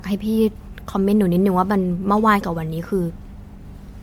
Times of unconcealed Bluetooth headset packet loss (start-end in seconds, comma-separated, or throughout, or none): none